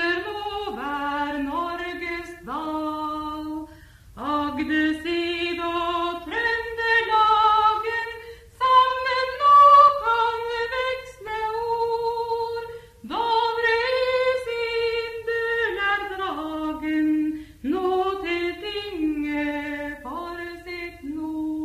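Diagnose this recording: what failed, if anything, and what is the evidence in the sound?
Nothing failed, and the sound gives no evidence of a fault at any stage.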